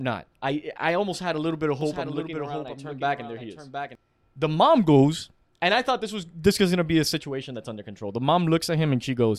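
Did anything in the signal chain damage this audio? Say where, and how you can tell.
Yes. A doubled audio track appears from 1.81 to 3.95 s, right after "a little bit of", likely from a slower second capture path or a misaligned edit. A full-band copy trails roughly 0.7 s behind, about 5 dB quieter, with no reverberant decay, and it starts and stops abruptly.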